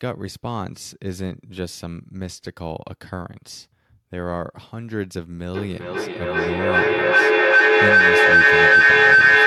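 From 5.54 s to the end, feedback howl takes over: two devices in the room loop each other, building a tone around 1.5 kHz, pulsing roughly every 400 ms, about 15 dB over the speech.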